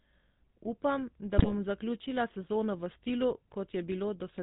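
From start to finish the speech carries the GSM full-rate codec sound, a buzzy, gravelly roughness that fits the 13 kbps full-rate coder. The codec rebuilds the voice from a vocal-tract filter driven by regularly spaced pulses and keeps only a thinned-out excitation, so fine detail is lost and the damage is plainly audible. On a spectrogram, energy stops sharply at 4 kHz, and the harmonics look smeared and grainy rather than cleanly striped.

Between 1.38 and 1.52 s, just before "zaključila sezono v stilu", GSM bit errors break the voice into a brief squawking, gargling burst. Corrupted filter, pitch and gain values make the decoder produce a wrongly shaped spectrum and sudden jumps in level. Four 20 ms frames within the 0.14 s span are damaged, with a heavy error rate of roughly 7 percent. On a waveform the disturbance shows as a blocky spike in level, and on a spectrogram as a smeared, discoloured patch that stands out from the speech around it.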